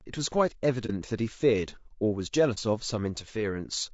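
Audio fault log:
Throughout: low-delay AAC compression. The speech sounds rough and grainy, with noise filling the gaps between harmonics and a thin, synthetic-sounding top band. This is likely AAC-ELD's short frames resolving pitch poorly, with damage that suggests a bitrate near 32 kbps.
0.86 s and 2.54 s: AAC frame loss with muting. Each time the sound fades out and back in, leaving a brief dip of about 30 ms. The decoder zeroed the missing spectrum, and the overlapping windows smoothed both edges.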